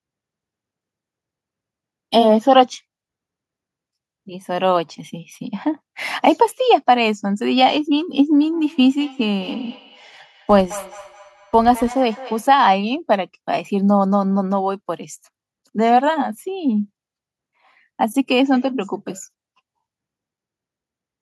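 Feedback echo between two devices runs from 8.42 to 12.62 s. The speech is picked up by a nearby microphone and sent back, and no echo canceller is watching that path. Each stretch returns about a fifth of a second later, thinner and ringing, peaking about 19 dB below the speech.

A filter restarted on every block appears from 10.49 to 11.95 s. The filter loses its memory at each block boundary and starts again from silence, leaving a small transient each time. The result is a 100 Hz buzz that rises and falls with the speech level, which fits 10 ms blocks.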